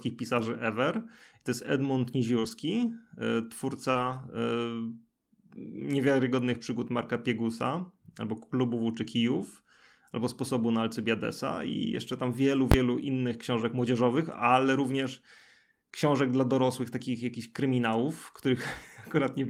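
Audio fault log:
2.39–2.45 s and 3.91–3.97 s, short concealed packet loss: about 40 ms of the call failed to reach the decoder in time at each point, and the receiver filled nearly all of it by carrying the preceding sound forward, following its pitch where voiced and using shaped noise where not, before blending back into the real stream. Each spot comes across as a brief smear or wobble, and a short consonant there can drop out entirely.
2.43–2.49 s and 3.95–4.17 s, lost packet rebuilt from error correction: right after each concealed gap, further packets went missing. The next packet carried a low-bitrate backup copy (Opus in-band forward error correction), which the decoder played instead of leaving a hole. That covers 40 ms at the first point, fitting two 20 ms frames, and 120 ms at the second. These stretches stay continuous but sound rougher and noisier.
12.72 s, invalid numbers at full scale: a processing calculation produced infinite or invalid values for a block of about 20 ms, and these were pinned to the maximum sample value. 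Because the block is so short, it is heard as a single loud bang between "i jeszcze tam wielu" and "innych książek młodzieżowych ale", with the output held flat at one extreme, far beyond the speech peaks, for that instant.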